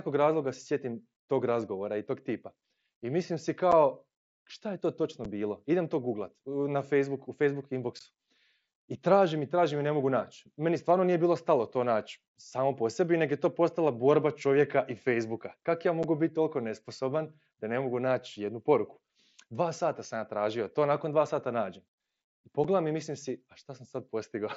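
Speech carried over a Bluetooth headset link shows unconcealed Bluetooth headset packet loss at 3.72, 5.25, 7.99, 16.03 and 22.64 s. Each hole lasts 7.5 ms, except at 7.99 s, which lasts 15 ms, as if two packets went missing. The lost audio was replaced by silence or an idle pattern, so the speech stops and restarts with abrupt edges. On a waveform these appear as brief, near-flat notches. On a spectrogram they are thin vertical gaps cutting through the speech bands, and the mSBC wideband content reaches up to 8 kHz.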